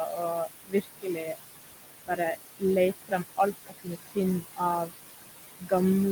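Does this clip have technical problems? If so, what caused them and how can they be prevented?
Yes. Throughout the speech, the room noise, sitting only about 8 dB below the voice, pumps down between phrases and back up beneath them. These are noise suppressor artifacts: the suppressor pulls whatever bands it judges steady noise down by about 18 dB, frame by frame. To prevent this, reduce the room noise at the source or use a gentler suppression setting.

Speech is also cut by the noise suppressor from 0.06 to 1.4 s, from 3.0 to 4.93 s, and from 5.59 to 5.72 s. Across roughly half a second, most of a second and a tenth of a second respectively, quiet parts sound swallowed, dropping by about 20 dB because the suppressor mistook them for noise. To prevent this, keep the microphone closer to the talker so soft sounds stand well clear of the background.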